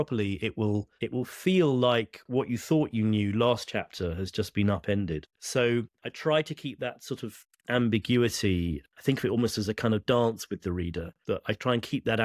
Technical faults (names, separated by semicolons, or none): none